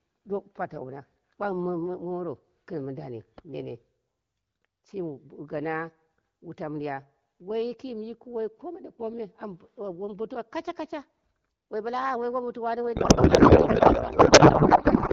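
Speech, carried over AMR wideband (HD Voice) with only light coding roughness that fits a rate around 12.65 kbit/s, until a codec payload misread takes over at 12.95 s and runs to the end at 15.12 s. The voice turns into garbled noise and warble that barely follows it, which points to octet-aligned AMR frames being unpacked as bandwidth-efficient. Unlike packet loss, nothing drops out or repeats, and the damage doesn't recover.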